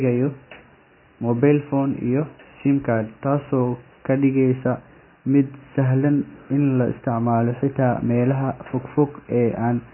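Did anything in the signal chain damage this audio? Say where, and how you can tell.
Yes. Throughout the speech, nothing sounds above 3 kHz and the sound is watery and swirly, heavy damage at the codec stage, likely MP3 compression starved of bits.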